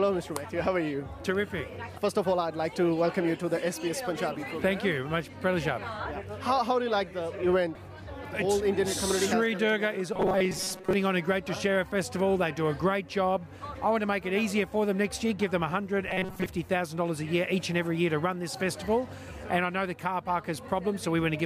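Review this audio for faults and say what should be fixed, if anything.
Audio likely arrived too seldom, so playback kept looping its last short buffer, which fits a buffer of about 5.3 ms. The result is robotic sound from repeated short buffers, a rigid metallic buzz at 188 Hz. From 10.13 to 10.93 s about half the sound is repeats, and from 16.09 to 16.46 s most of it is. A larger jitter buffer or steadier delivery of audio to the player would prevent this.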